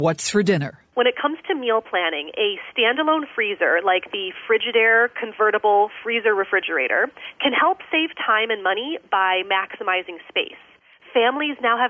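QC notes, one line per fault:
throughout, gain pumping: the gain swings around 5 dB, pulled down on loud sounds, likely a fast limiter on excess gain.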